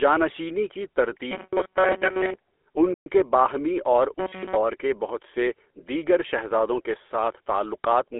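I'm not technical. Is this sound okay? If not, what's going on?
No. Three separate problems affect this speech recording.

GSM full-rate codec, throughout: the whole clip has passed through the old GSM mobile-phone voice encoding. It rebuilds the voice from a simplified model of the throat and mouth, fed by regular pulses, which gives it a buzzy, gravelly roughness that is plainly audible here. Nothing above about 3.4 kHz survives, so the sound is narrow and phone-like, missing the crisp top end of normal speech.

Robotic sound from repeated short buffers, 1.31 to 2.35 s and 4.19 to 4.55 s: here the voice turns into a stiff, metallic buzz pitched at 188 Hz. The likely cause is fresh audio arriving too slowly, so the software keeps replaying its last tiny scrap of sound, about 5 ms, which fits a very small buffer, while real audio is skipped. In the first stretch much of the sound is replaced this way. 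In the second, between "کے باہمی اور" and "کے بہت سے دیگر", all of it is.

Playback stall, 2.94 s: the sound cuts out for about 120 ms, just before "کے باہمی اور", then carries on. A short gap like this most likely means the player briefly ran out of audio data, or was held up, and went silent until it caught up again.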